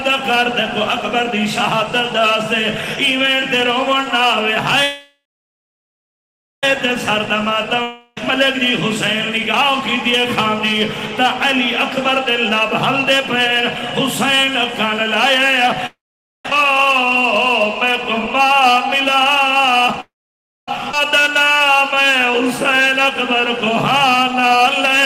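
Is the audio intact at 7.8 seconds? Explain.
No. From 7.82 to 8.17 s there is a long network dropout, likely from packets that never arrived. The receiver stretches the last sound into a buzzy, fading hiss for about 0.34 s, then a brief silence of roughly 10 ms, and the audio resumes with about 0.62 s of material gone. On a spectrogram this appears as smeared, decaying horizontal bands and a thin gap, followed by an abrupt jump in content.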